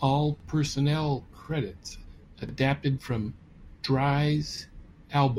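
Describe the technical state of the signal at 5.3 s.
At 5.3 s the speech signal is intact, with no audible fault.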